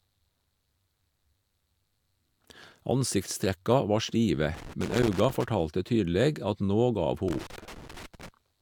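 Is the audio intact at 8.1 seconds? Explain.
No. At 8.1 seconds the speech sits inside a burst of loose connector crackle running from 7.28 to 8.29 s. A worn or dirty contact is making and breaking, chopping the signal into an irregular scratching crackle.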